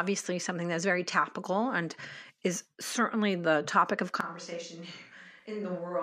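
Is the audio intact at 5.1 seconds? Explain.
No. A switch to a distant microphone begins at 4.21 s, just after "certainly the topic of", and lasts to the end. The close microphone's signal likely dropped out, leaving a farther one: speech turns suddenly roomy and thin, about 10 dB quieter, with more background noise.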